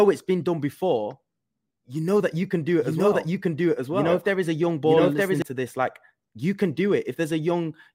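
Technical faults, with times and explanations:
2.82–5.42 s, doubled audio track: after "that you can do", the speech is joined by a second, full-band copy of itself trailing about a second behind and at roughly the same loudness, so two overlapping streams talk over each other with no reverb tail or room colour on the echo. The copy cuts in and out abruptly before "to this like you". The likely cause is the same signal captured again through a slower path, or an edit leaving two offset copies.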